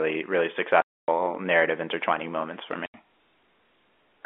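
Speech carried over a G.711 telephone line, which confines it to about 250 Hz to 3.5 kHz, suffers packet loss filled with silence: runs of packets never arrived and the receiver played nothing in their place. The first hole lasts 260 ms, from 0.82 to 1.08 s, just before "narrative intertwining moments for". The second lasts 80 ms, from 2.86 to 2.94 s, right after those words. Both lengths fit whole 20 ms packets, and the speech cuts out abruptly at each gap.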